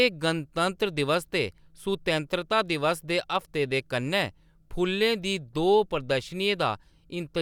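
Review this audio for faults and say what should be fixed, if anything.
Nothing in this speech recording needs fixing, as no faults can be heard anywhere in it. No repair or corrective processing is called for.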